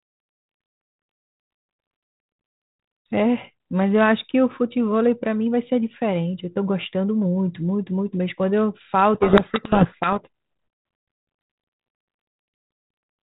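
From 9.14 to 10.17 s, a codec payload misread buries the speech in harsh, rasping distortion. The receiver reads the G.726 code words with their bit order reversed. Each sample's difference value comes out wrong. The 32 kbit/s G.726 path around it carries only light coding noise.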